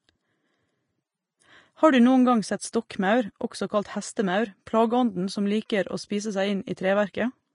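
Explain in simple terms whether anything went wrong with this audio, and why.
Yes, two things went wrong. Throughout the speech the sound is hissy and grainy, and nothing reaches above about 10.5 kHz, so it lacks sparkle. This is likely Vorbis compression set to a low quality. To save space, the codec removed the highest sounds and stored the upper detail so roughly that it became a fizzy texture. That texture stays with the voice the whole way through. A background hiss from a noisy recording would stay steady even during pauses, but this one does not.

There is also pre-echo at 2.72 s, just after "du noen gang sett", and at 4.66 s, between "også kalt hestemaur" and "plageånden som liker å". A hiss of about 11 ms comes just before a sharp sound, which then sounds softened. The codec spreads its error over a small block of time, so noise meant for the loud onset leaks into the quiet moment before it. 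A click is a single snap. Pre-echo is a brief hiss that leads into the sound it belongs to.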